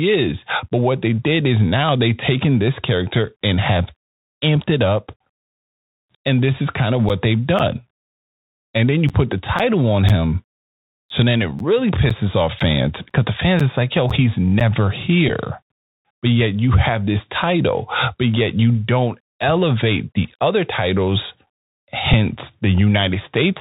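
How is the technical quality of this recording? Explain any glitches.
The recording has plainly audible codec damage throughout, plus a few short glitches and a run of regular dropouts in the middle.

Bluetooth CVSD headset codec, throughout: the whole clip is narrowband, with nothing above 4 kHz. The sound fits a 64 kbps one-bit delta stream whose adaptive step cannot keep up with loud, bright sounds. That gives scratchy s sounds and a granular hiss under the speech. The hiss and slope distortion set it apart from a simple low-pass telephone band.

Bluetooth headset packet repeated, at 5.09–5.13 s just after "and have amped it", at 15.29–15.31 s, and at 22.13 s: here the headset link dropped voice packets, and the decoder replayed the previous packet's bits. The events at 5.09 s and 22.13 s each replace about 3.8 ms of audio with one repeated packet and come across as small ticks. The 15.29 s event repeats three packets, covering 11.2 ms, and briefly buzzes near 267 Hz. 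Each one is isolated and irregular, which sets it apart from the dropouts.

Periodic USB or driver dropouts, from 7.09 s to 14.61 s, starting after "this is kind of": roughly fifteen gaps of around 10 ms fall every 0.5 s. Each gap is filled with silence while the bus or driver stalls. They are heard as evenly spaced ticks whenever speech is present. The strict clock-like spacing and the silent fill distinguish them from the repeated-packet glitches.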